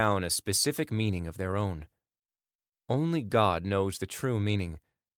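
No technical faults can be heard anywhere in this speech recording.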